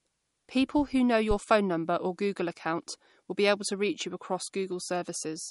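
A speech recording carries plainly audible MP3 compression throughout. Nothing sounds above 11.2 kHz, and the watery, swirling texture and smeared consonant attacks come from spectral lines dropping in and out between frames. That likely points to an MP3 encode at a low bitrate, near 47 kbps. A broadband hiss limit would lack that flickering. From 1.31 to 1.37 s there is a phantom power thump, a deep low-frequency step that dies away in about 14 ms. It is lower and rounder than a click or dropout, which marks a supply switching on a live input through its coupling capacitors.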